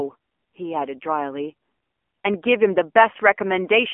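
Throughout, the speech has been squeezed through the AMR narrowband mobile codec at a low rate, fitting its 7.4 kbps mode. Only a 250 Hz to 3.4 kHz telephone band remains, nothing above 3.5 kHz, and the coarse vocal-tract modelling adds a plainly audible buzzy, synthetic edge.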